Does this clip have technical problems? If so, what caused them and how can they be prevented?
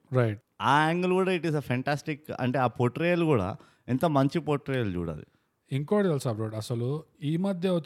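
No, there are no technical problems in this clip.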